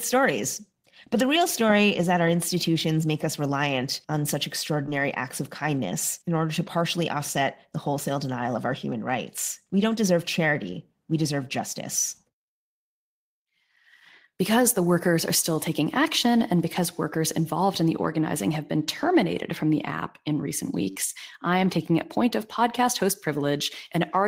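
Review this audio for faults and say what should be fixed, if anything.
Short concealed packet loss occurs at 4.86 s and from 20.91 to 20.96 s. About 10 ms and then 40 ms of the stream arrived too late to decode, and the receiver covered each gap by extending the preceding sound before blending back, heard as a brief smear. A larger jitter buffer or forward error correction on the network link would prevent it.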